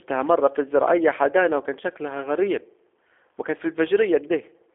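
A speech recording carries G.729 codec damage from start to finish, plainly audible as a rough, slightly synthetic texture. Nothing above about 3.5 kHz survives, and the band sits between 300 Hz and 3.4 kHz, the classic telephone line. The coder rebuilds each 10 ms frame from a vocal tract filter, a pitch predictor and a few pulses rather than the original waveform, and the roughness fits the 8 kbit/s G.729A variant.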